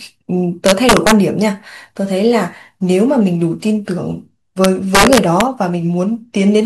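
Integer overflow corrupts this speech twice, from 0.66 to 1.12 s and again from 4.64 to 5.41 s. In both spans the signal was pushed about 4 dB past the largest value the integer format can hold. Instead of being limited at full scale, each peak wrapped around to the opposite sign. Every loud moment therefore jumps across the entire range, producing violent, sharp cracks far harsher than ordinary clipping.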